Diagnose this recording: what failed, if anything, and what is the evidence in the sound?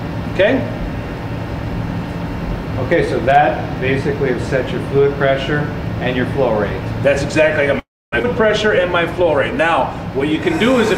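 A call audio freeze occurs from 7.79 to 8.14 s. The last sound is briefly extended, then drops to silence for most of the 0.33 s gap. Audio resumes where it stopped with nothing lost, likely from delayed network packets draining the jitter buffer.

A skip ahead follows at 8.22 to 8.25 s. Playback jumps forward, with about a fifth of a second of audio missing and the two sides joined almost directly. This points to the jitter buffer discarding backed-up audio to recover the delay the freeze added.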